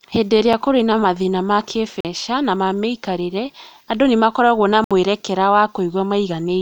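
Blocks of digital silence occur at 0.53 s, 2.00 to 2.05 s, and 4.84 to 4.91 s, where runs of samples drop to silence, most plausibly because the output buffer was not filled in time. The 5 ms gap just before "kũrĩ na mathĩna ma" is a single tick. The 43 ms hole between "kũrĩ na mathĩna ma" and "na ma mĩikarĩre andũ", which fits a 2048-sample buffer, and the 64 ms hole after "andũ nĩ makoragwo na" are audible dropouts, each cutting out and back with no fade.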